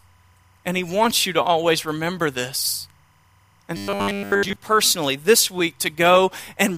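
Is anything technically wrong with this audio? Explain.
Yes, two faults. Timecode bleed: 25-frame linear timecode leaks from a neighbouring track or cable, leaving a faint chirping warble near 1 and 2 kHz, about 40 dB down, throughout.

Robotic sound from repeated short buffers: from 3.77 to 4.56 s, just before "personally this week", a 10 ms buffer was likely replayed while most real audio was skipped, forcing the speech into a rigid, metallic 100 Hz buzz.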